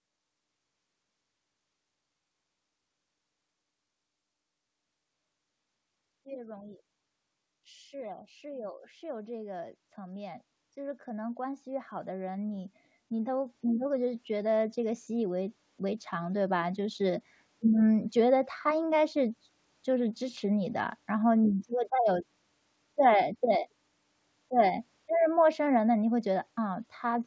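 From 6.23 s to 17.05 s, automatic gain rising is heard: the gain control judged the input too quiet and stepped its gain up by about 17 dB, so the voice and the background noise swell together, with content already limited to below 8 kHz by the wideband call codec.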